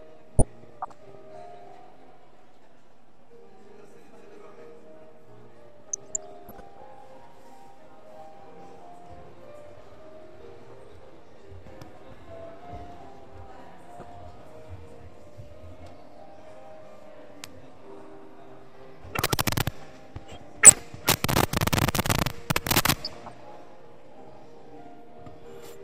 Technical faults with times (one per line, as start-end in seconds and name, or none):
0.39-1.15 DAB burbling
5.87-6.87 DAB burbling
13.90-14.03 DAB burbling
20.47-20.79 DAB burbling
23.05-23.32 DAB burbling